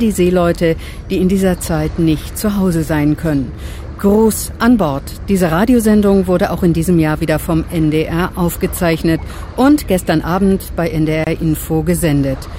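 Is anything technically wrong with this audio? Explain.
Yes. There is a gap at a join of encoded pieces, from 11.24 to 11.27 s. The sound breaks for about 27 ms, then resumes exactly where it broke off. The edges are abrupt but softened by the codec, so the truly silent part is shorter. This happens when audio is encoded in separate pieces and then joined without trimming. The encoder's start-up delay and the padding on the final frame stay in the file. Together they form this short silent hole in otherwise continuous sound.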